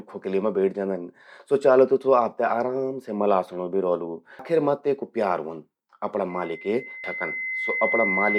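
At 4.39 s a brief glitch marks damaged data in a compressed stream. Corrupted bytes make the decoder misread a frame and lose sync, so it searches for the next frame header.

From 6.29 s to the end, a loudspeaker feedback squeal rises at 2 kHz. The microphone picks up its own loudspeaker, and loop gain above one at that frequency lets the tone swell over about two seconds until it is roughly as loud as the speech. A fixed interfering tone would start at full strength instead.

Within the squeal, a second burst of damaged data occurs at 7.04 s.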